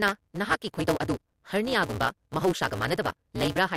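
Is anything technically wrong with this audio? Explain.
Yes, there's a block size mismatch (truncated) running through the whole speech clip. Each block gets cut short, fitting a 256-sample read, so the tail is discarded. You hear a buzz at 188 Hz, and the speech runs about 1.88 times fast with its timbre unchanged.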